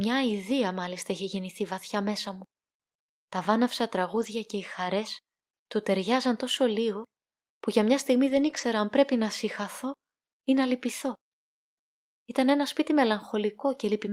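At 4.13 to 4.27 s, just before "και οι χαρές του", and again at 8.29 to 8.59 s after "που για μια στιγμή", there's a lost packet rebuilt from error correction. The decoder filled each gap with the low-bitrate backup copy carried in the next packet, so nothing drops out, but those stretches sound rougher and noisier.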